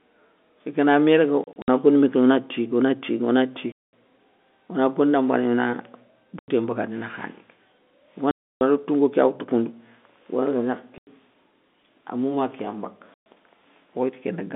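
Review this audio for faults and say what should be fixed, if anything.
The speech drops into abrupt silent holes with hard edges at 1.44 to 1.68 s (several short gaps, none over 60 ms), 3.72 s after "tigui ona tigui ona", 6.39 s before "mbagandi nakhané", 8.31 s (300 ms), 10.98 s, and 13.14 s after "kéya mbaka". This is packet loss filled with silence. Each gap is a multiple of 30 ms, which fits 30 ms packets being dropped and replaced with nothing.

Prevention: add packet loss concealment or forward error correction at the receiver so missing packets are rebuilt instead of muted.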